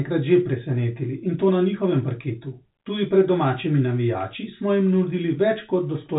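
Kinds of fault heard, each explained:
No faults can be heard in this speech clip. It comes through G.711 telephone coding, so nothing is heard above 4 kHz, and its level-following coding noise stays faint.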